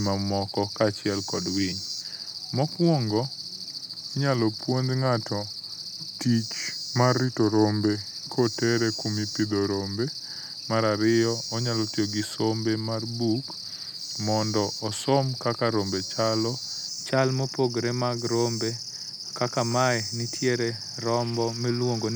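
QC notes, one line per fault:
0.0–16.88 s, wrong sample rate: speech slow and low, 0.919 speed, 1.47 semitones down, fitting 48 kHz audio played at 44.1 kHz; spectrogram harmonics shifted down, time-stretched.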